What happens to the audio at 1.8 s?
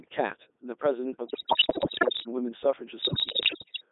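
At 1.8 s the sound is in the middle of a burst of bit errors on digital voice radio, running from 1.26 to 2.28 s. A large share of the received bits, roughly one in five, arrive flipped. In a vocoder this sparse, each bit helps set the pitch, level, voicing or spectral shape of an entire frame, so the corruption becomes audible at once. The synthesised speech lurches in pitch and loudness, its tone colour shifts abruptly, and it collapses into bleeps, warbles and robotic gibberish across that second.

Underneath the burst, the whole clip carries heavy Codec 2 vocoder damage, at a quality that points to the 3.2 kbit/s mode. Codec 2 transmits only pitch, voicing, energy and a spectral envelope. The decoder then rebuilds the speech from sine waves rather than preserving the waveform, so it sounds buzzy and robotic. The audio is also confined to a narrow radio band of about 250 Hz to 3.7 kHz, which gives it a thin, boxy quality.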